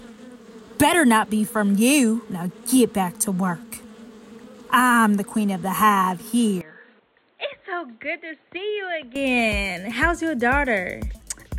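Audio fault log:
6.61–9.16 s, input switched to a poorer device: the sound abruptly turns dull and boxy, with nothing above 4.2 kHz, drops roughly 10 dB in level and gains a faint new noise floor, with no gap at the switch. This likely reflects capture moving to a narrower-band microphone or headset profile.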